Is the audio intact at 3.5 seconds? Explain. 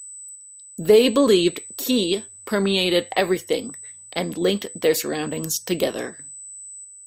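No. At 3.5 seconds the speech carries USB whine, a steady tone at 8 kHz that runs through the whole clip, not just this moment. The 8 kHz pitch matches the 125-microsecond microframe rate of a high-speed USB bus, whose current draw is leaking into the audio through the power or ground. It sits roughly 20 dB below the speech, an audible thin, high-pitched whine under the voice.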